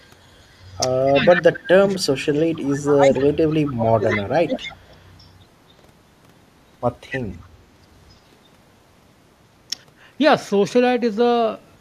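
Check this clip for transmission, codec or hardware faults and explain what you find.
Two echo-path faults are present: an echo leak returning the far end's speech, and speech suppressed in double talk.

Echo leak: 0.0–0.26 s, 0.43–0.8 s, 1.06–1.3 s, 4.11–4.22 s, 4.57–5.01 s, 7.1–7.19 s and 7.42–7.47 s. A delayed copy of speech trails the original by 265 ms, most likely because a loudspeaker's output reached a microphone and the echo canceller passed part of it. The copy is faint, roughly 40 dB down near 0 s and 7.4 s. It is strongest at 4.11 s, only about 10 dB below the speech, and around 15 to 20 dB down elsewhere. On a spectrogram it shows as weaker duplicate harmonic patterns shifted 265 ms later.

Speech suppressed in double talk: 1.11–4.62 s, about 3 s affected in total. While both sides overlap, the talker's level drops and breaks into pieces, falling as much as roughly 30 dB at its deepest. 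This is likely an echo canceller that could not tell the local talker from the echo and attenuated both. The waveform envelope collapses in uneven chunks, and the spectrogram shows harmonics and high-frequency energy thinning or vanishing in patches.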